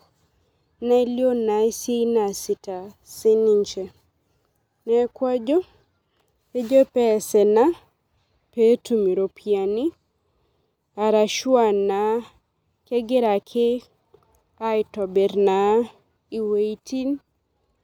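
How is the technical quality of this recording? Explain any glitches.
The speech recording has no audible technical glitches at any point in the signal.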